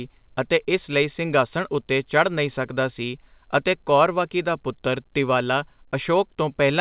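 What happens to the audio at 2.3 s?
At 2.3 s the speech carries on intact, with no dropout, glitch or distortion, only the call path's steady narrowband sound that stops at 4 kHz, which fits a 64 kbps G.711 A-law telephone codec.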